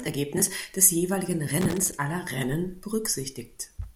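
An irregular burst of crackle and scratching breaks into the speech from 1.61 to 1.93 s. This is loose connector crackle: a worn or dirty contact making and breaking, chopping the signal.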